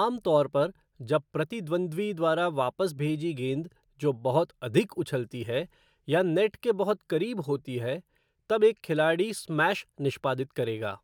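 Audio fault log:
No faults heard.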